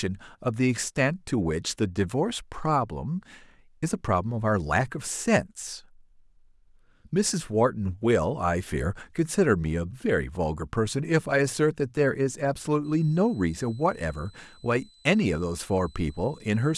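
From 12.84 s to the end there's a switching supply whistle, a thin tone near 4 kHz, wandering slightly between 4.00 and 4.04 kHz, sitting about 35 dB under the speech. A power supply is running in an audible burst mode or beating with another one.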